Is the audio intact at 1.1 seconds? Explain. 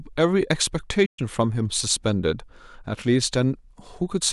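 No. At 1.1 seconds the speech is interrupted by a playback stall running from 1.05 to 1.19 s. The sound stops abruptly in mid-flow and the output falls silent for 120 ms. Then the speech resumes. The likely cause is the player running out of buffered data, or its playback thread being blocked, so nothing reaches the output until it recovers. The break is short but clearly audible as a hole in the speech.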